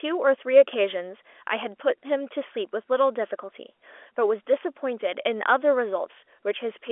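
Speech over a G.711 A-law telephone path at 64 kbps, band-limited to the 300 Hz to 3.4 kHz line band with nothing above 3.7 kHz and at most faint coding noise; no technical faults.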